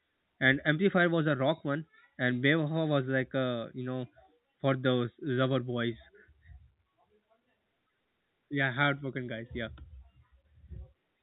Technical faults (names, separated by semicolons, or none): none